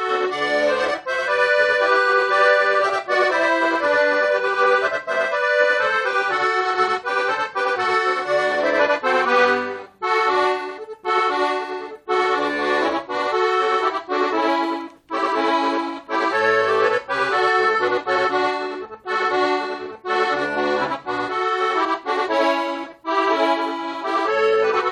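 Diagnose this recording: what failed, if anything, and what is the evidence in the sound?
Every event in the audio arrives twice, the second copy about 93 ms behind the first and just as loud, so it sounds like a flat doubling or a single slap echo that lasts the whole clip. This is channel delay (doubling) at the driver or buffer stage: one channel was held back by a whole buffer, which fits a 4096-sample buffer, before the two channels were summed to mono, leaving the late copy audible as a separate repeat.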